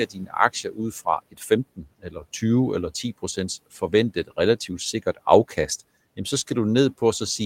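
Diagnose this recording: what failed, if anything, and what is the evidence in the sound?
Speech cut by the noise suppressor, a call-processing fault, at 0.07 to 0.35 s, 0.53 to 0.79 s, 1.31 to 1.51 s and 1.76 to 2.24 s. The suppressor mistook parts of the speech for room noise and pulled them down by about 11 to 17 dB, leaving them faint and swallowed.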